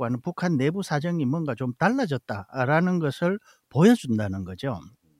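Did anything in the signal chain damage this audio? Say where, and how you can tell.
No, nothing along the signal chain has left audible damage on this speech recording, and the signal holds steady throughout.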